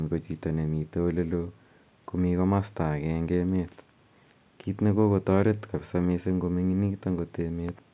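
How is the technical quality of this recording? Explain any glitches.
No technical faults are audible.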